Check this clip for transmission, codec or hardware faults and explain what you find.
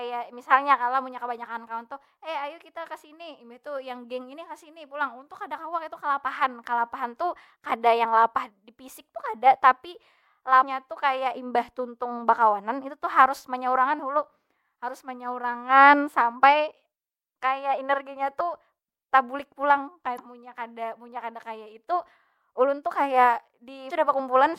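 Damaged data in a compressed stream, at four points in the speech: 10.62 to 10.65 s, 13.98 s, 20.15 to 20.20 s, and 23.87 to 23.91 s. Corrupted bytes in the encoded stream make the decoder misread or reject those frames, lose sync and scan ahead for the next valid frame header. Each event is a short chirp, squawk, click or short hole lasting well under a tenth of a second, with the longest near 20.2 s.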